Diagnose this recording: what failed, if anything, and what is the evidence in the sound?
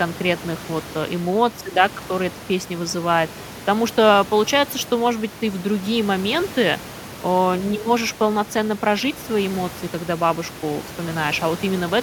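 Nothing in the signal chain has failed: the speech sits steadily above the room's own background noise, which stays about 18 dB lower and belongs to the recording space rather than to any stage of the system.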